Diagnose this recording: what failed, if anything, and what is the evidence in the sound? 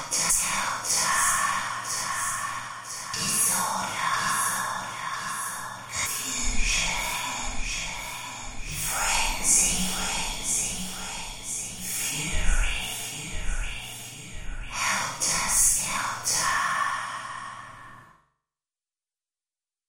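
Damaged data in a compressed stream, at the codec stage: a brief glitch at 0.29 s and another from 6.05 to 6.07 s. The decoder misreads corrupted frames and resynchronises. Unlike a buffer dropout, the fault lies in the coded data itself.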